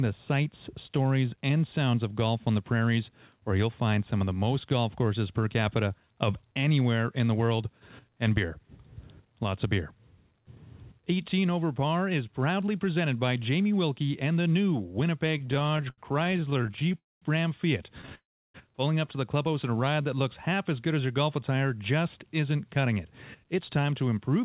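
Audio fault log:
15.38–16.95 s, repeated stalls (stutter): the sound catches about 30 times in quick succession, with the longest hold near 77 ms and 364 ms filled in all. That is roughly a quarter of the span, and nothing is lost. Packets arrived late and the jitter buffer kept running dry, so the receiver extended the last sound each time. On a spectrogram, harmonics freeze into short flat smears. The waveform shows repeated stretches of copied cycles, some tapering off.
16.97–17.24 s and 18.15–18.56 s, call audio freeze: the sound halts for 241 ms and then 394 ms, and it resumes where it stopped. The buffer likely emptied while packets were held up in transit. The receiver carried the last sound on briefly, then let it fade, leaving about 210 ms and 340 ms of silence. The waveform drops to a flat line, and the spectrogram shows a smeared tail followed by a blank column, within a band that ends at 4 kHz.
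19.85–20.50 s, jitter buffer slow-down: this passage plays at 94% speed with its pitch unchanged, so sounds are drawn out. The receiver was building up a reserve by repeating single pitch periods and bits of pauses, adding 49 ms in total. A spectrogram shows harmonics lengthened horizontally at constant frequency. The waveform shows near-identical periods repeated back to back.
22.18–24.43 s, jitter buffer speed-up: the ending runs at 108% speed at the same pitch and sounds hurried. Excess audio had piled up in the buffer, likely after delayed packets arrived together, so the receiver trimmed short pieces one or a few pitch periods long, about a fifth of a second overall. On a spectrogram, the events are compressed in time at unchanged frequencies. In the waveform, cycles are missing at the splice points.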